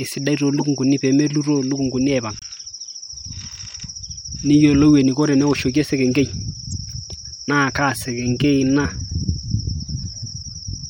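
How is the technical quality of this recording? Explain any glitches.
The recording has two kinds of fault: three brief decoding glitches and a slowed ending.

A corrupt frame decoded occurs at 0.55 to 0.62 s, 2.39 to 2.44 s and 6.70 s, each touching a couple of compressed frames. Damaged bits were decoded as if valid, so misread gains and codes put energy at the wrong frequencies, heard as a short chirp or burst of noise. Unlike a dropout, which leaves silence or a concealed gap, these are spurious added sounds lasting only a frame or two.

From 7.9 s to the end, the speech runs at about 0.74 times its original pace while the pitch stays unchanged. This is likely a time-stretched section, where software lengthened the audio by repeating short pieces. A slowed tape or wrong sample rate would instead lower the pitch along with the pace. Here the abrupt switch to a slower rate with steady pitch points to stretching.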